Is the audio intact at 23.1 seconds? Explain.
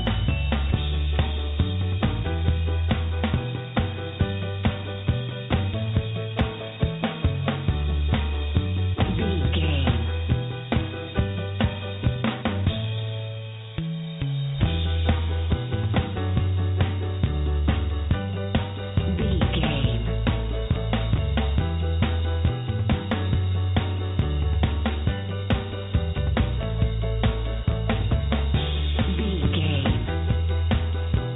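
Yes, the audio is intact at 23.1 seconds, with nothing there beyond the narrowband sound of the call path, which carries nothing above 4 kHz.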